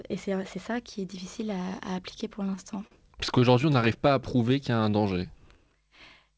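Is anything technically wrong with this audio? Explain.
Yes. The speech, carried over a G.722 call path that removes everything above 8 kHz, has two stuttering passages and one slowed stretch.

Repeated stalls (stutter), 2.34 to 2.93 s, just after "est difficile à appliquer": late packets drained the jitter buffer six times. The receiver stretched the last sound to fill about 92 ms, with gaps up to 42 ms, so the speech drags and hiccups.

Repeated stalls (stutter), 3.29 to 3.98 s, ending just before "pas à": seven shorter stalls, none longer than 16 ms and about 68 ms in total, were each bridged by continuing the previous sound. The result is a lighter stutter.

Jitter buffer slow-down, 4.36 to 5.62 s, right after "pas à": to rebuild its reserve, the receiver repeated pitch periods and adding about 136 ms. Speech plays at roughly 90% speed with unchanged pitch and sounds drawn out.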